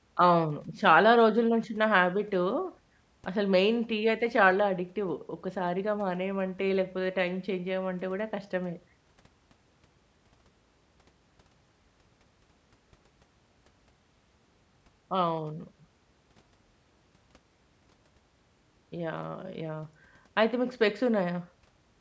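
A speech recording with nothing technically wrong with it.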